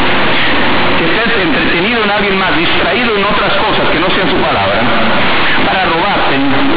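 Speech carrying companded audio read as linear from start to finish: mu-law bytes are being played as plain 8-bit samples, so quiet passages swing as hard as loud ones. Unlike ordinary clipping or overdrive, the pauses fill with loud buzzing noise instead of falling silent.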